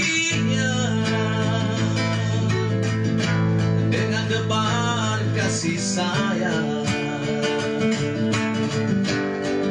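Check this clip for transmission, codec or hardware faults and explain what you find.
No transmission, codec or hardware faults turn up in this clip.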